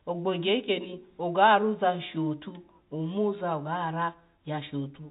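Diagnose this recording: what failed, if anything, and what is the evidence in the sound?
Nothing failed here: the speech comes through G.711 telephone coding, so it tops out around 4 kHz, which is just how that format sounds, and nothing in it points to a broken stage anywhere along the chain.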